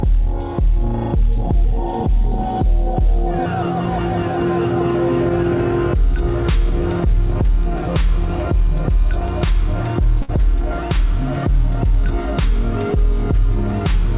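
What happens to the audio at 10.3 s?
A burst of packet loss runs from 10.22 to 10.29 s. The receiver extends the last sound for 64 ms, fading it into a held buzz or hiss, then resumes with 60 ms skipped. Unlike a plain dropout, the gap is filled, not silent.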